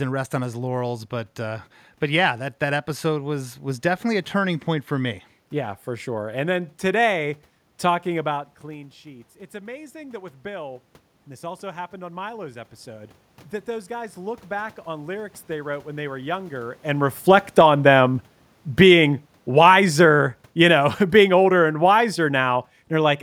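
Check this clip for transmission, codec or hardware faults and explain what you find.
The clip shows automatic gain control faults, no transmission or codec faults. Automatic gain rising occurs from 8.63 to 10.8 s and from 11.41 to 16.86 s. After the talker moves back around 8 s, the input falls about 17 dB. The control compensates slowly, by about 4 dB before "and this" and about 7 dB after, so voice and room noise swell together.

Automatic gain falling runs from 17.15 to 23.18 s. After the talker moves around 16.5 s, the control finds the level too loud and pulls its gain down by about 9 dB over six seconds. The voice starts loud and then sinks along with its background.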